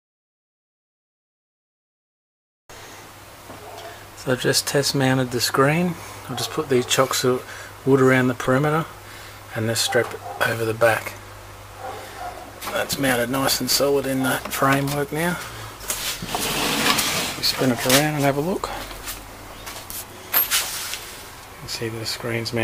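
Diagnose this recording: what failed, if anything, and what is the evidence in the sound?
The converter failed with sample clock jitter from 10.16 to 18.16 s: an unsteady clock, roughly 10 µs, adds hiss that tracks loud, bright passages, roughly 10 dB below the signal.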